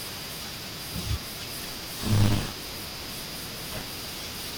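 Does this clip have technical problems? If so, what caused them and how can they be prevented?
Yes. From 1.61 s to the end, the program filling the playback ring buffer and the hardware reading it have drifted out of step, so the two positions cross inside every period. This is buffer tearing. About a third of each buffer still holds speech from around 40 ms earlier, spliced in with hard joins on both sides. The result is a steady robotic buzz at 100 Hz, which fits a period of about 10 ms, heard only while speech is present. To prevent it, lock the writer to the hardware read position and keep enough headroom that it never overtakes or falls behind within a period.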